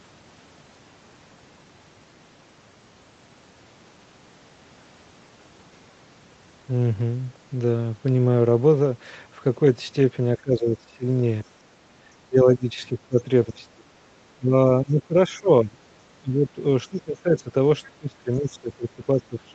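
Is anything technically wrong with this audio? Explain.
Yes, the speech is repeatedly pulled down in level and there is one brief gating of the background.

Speech suppressed in double talk occurs at 10.38–11.05 s, 11.43–11.52 s, 12.21–15.78 s, 16.2–17.5 s and from 17.86 s to the end. The speech dips by roughly 15 to 25 dB, thinning or breaking into fragments. The likely cause is an echo canceller that cannot separate the local talker from far-end echo during simultaneous talk, so it attenuates both.

Background gated by the echo canceller occurs at 11.8–11.93 s. The room sound drops by about 11 dB for roughly 150 ms, then returns. The canceller clamped the microphone while the loudspeaker was active and released it shortly after.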